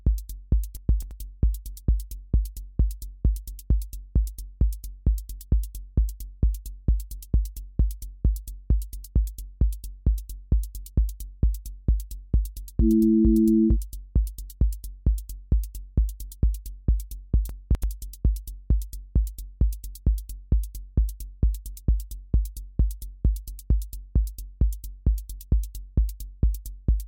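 At 0.77 to 1.11 s, and again at 17.49 to 17.84 s, chunks play out of order. In each span one block of about 85 ms arrives three blocks late and plays after audio that should follow it. Nothing is missing, but each roughly 0.34 s span sounds briefly scrambled, with three abrupt joins where the sequence is broken.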